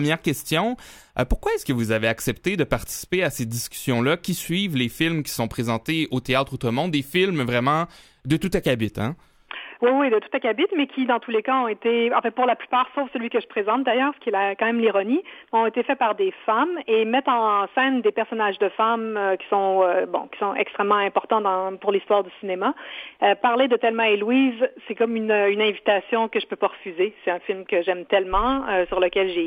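No technical faults can be heard anywhere in this audio. There is no moment in the recording that needs a timestamp or a closer listen.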